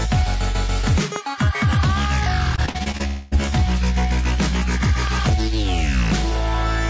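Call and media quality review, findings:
Loud pop, 1.16–1.18 s: single sharp transient, roughly 10 dB above the program. Likely a voltage step from connector, switch or driver glitch, shaped by downstream circuitry. Program continues underneath.

Repeated packet loss (robotic sound), 2.56–3.01 s: choppy sound from a string of short gaps, longest 50 ms. Each gap is patched by extending the last sound, so about a third of the span is concealed rather than received.

Long network dropout, 3.07–3.33 s: about 240 ms of audio is lost, likely from a network stall. The gap is bridged by a fading continuation of the preceding sound with no full silence, and it resumes without the missing part.

Loud pop, 5.07–5.31 s: two pops in quick succession, peaking roughly 10 dB above the program. Likely a plug, switch or static discharge event. Audio carries on beneath. The G.722 call path limits the band to 8 kHz throughout.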